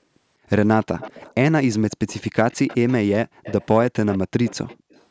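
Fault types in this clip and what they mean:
Echo leak: a faint copy of the speech, delayed by 194 ms, returns in six short bursts, typically some 20 dB below the direct sound. Most likely a loudspeaker on one side whose echo canceller let part of its microphone pickup through.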